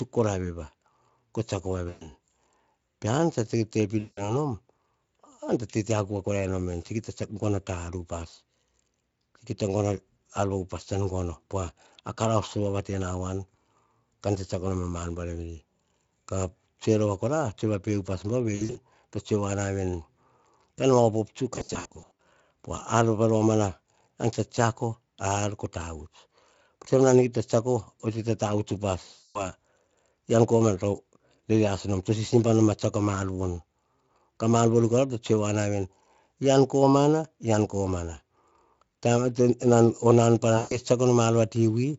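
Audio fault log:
1.89–2.06, 3.99–4.35, 18.55–18.78, 21.55–22.19, 29.13–29.43 and 40.57–40.78 s: VoIP packet loss concealed by the speech codec. Each gap, about 120–360 ms of missing audio (scattered bursts at 18.55 and 21.55 s), is filled by the Speex decoder extending its last pitch and filter at falling gain, so the sound smears into a fading buzz and recovers weakly afterwards.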